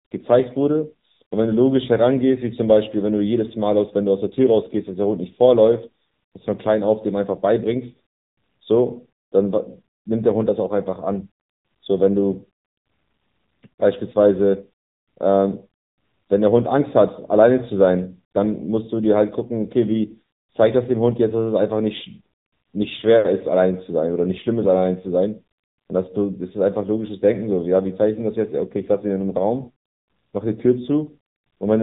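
From start to finish the speech carries AMR narrowband mobile codec damage. On a spectrogram it shows as a hard ceiling near 3.8 kHz. The sound is plainly buzzy and synthetic, which fits a low bitrate of around 8 kbps.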